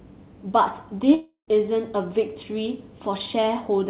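From 1.14 to 1.49 s the speech gives way to a fading buzz, then brief silence, before resuming further on; likely a long network dropout, with the receiver concealing lost packets.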